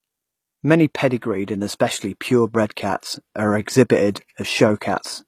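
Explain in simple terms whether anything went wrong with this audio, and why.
Yes, something went wrong: the speech was likely squeezed by HE-AAC compression, which stores only the lower frequencies and fakes the treble by copying those lower bands upward. Throughout the clip, s sounds come out gritty, lispy and metallic.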